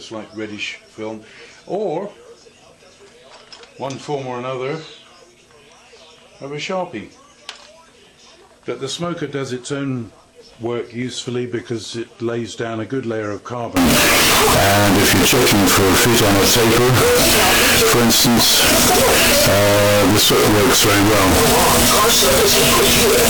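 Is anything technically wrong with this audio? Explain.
Yes. From 13.76 s to the end, the audio turns suddenly very loud and harsh, a near-square buzz at an almost fixed, high level, with quiet background raised to the level of the main sound while pitch remains traceable. This is likely a float read as integer fault: 32-bit float samples interpreted as 32-bit integers, so sign and exponent bits dictate amplitude.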